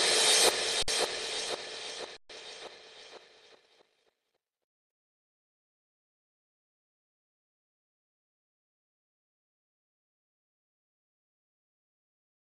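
At 0.83 s and again at 2.17 s the output suffers an underrun with held sample: the buffer runs dry, the converter freezes on its last value, and the sound flattens silently for 55 ms, then 128 ms. Playback resumes where it paused, so the ends are soft rather than clicky.

From 3.37 s to 7.17 s the material runs about 1.83 times faster while the pitch stays put, sounding rushed. This is likely a time-stretched section, shortened by discarding brief fragments.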